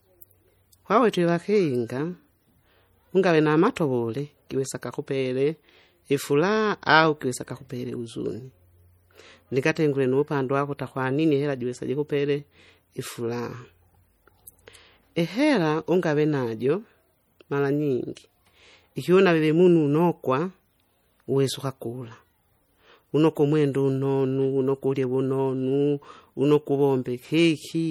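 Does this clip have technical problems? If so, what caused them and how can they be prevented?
Yes. Throughout the speech the sound is watery and swirly, with sibilants chirping metallically and onsets smeared. This is likely MP3 compression at a low bitrate, around 48 kbps. Too few bits forced the encoder to drop weak frequency lines, which flicker on and off between frames. Encoding at a higher bitrate or using a lossless format would prevent it.

At 3.76 s a brief hiss of about 10 ms comes just before an attack, softening it. This is pre-echo. The codec spread quantisation noise sized for the loud onset across its whole block, filling the quiet gap ahead of it. A higher bitrate, or an encoder that switches to short blocks on transients, would prevent it.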